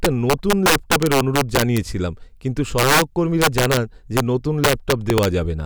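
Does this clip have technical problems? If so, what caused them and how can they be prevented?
Yes. Integer overflow cracks occur throughout this speech. Loud peaks are driven about 7 dB past full scale. Instead of being limited, roughly 2 percent of samples wrap to the opposite sign. Each wrap produces a violent crack, harsher than clipping. Saturating arithmetic or a limiter before conversion prevents it.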